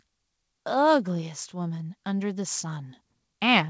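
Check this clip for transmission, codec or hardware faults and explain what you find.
One fault is audible: automatic gain rising, from 1.05 s to the end of the clip. From that point the speech and the room noise beneath it swell together, growing steadily louder over more than two seconds rather than jumping. The cause is the automatic gain control judging the input too quiet and gradually raising its gain. Because the gain is applied to the whole signal, the background lifts in step with the voice. The audio also has nothing above 8 kHz, which fits a wideband call codec such as G.722.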